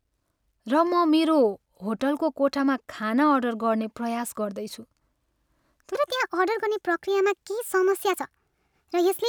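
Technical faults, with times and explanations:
5.95 to 9.29 s, section at the wrong speed: from here to the end the speech plays 1.3 times too fast, so it rushes and rises about five semitones together. Speed and pitch shift as one. This is likely from playback or editing against the wrong clock.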